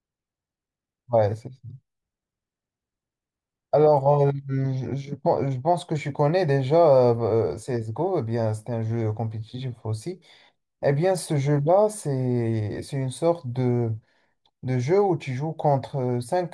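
No technical faults can be heard in the speech at any point.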